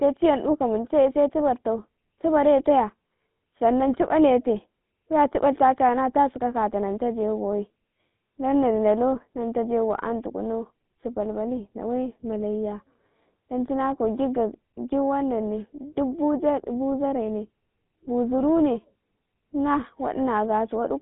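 From start to finish the speech carries GSM full-rate codec damage, plainly audible. The sound fits a 13 kbps stream. The line band runs from 150 Hz to 3.6 kHz, with nothing above 3.8 kHz. Pulse-driven vocal-tract coding leaves a buzzy, gravelly roughness.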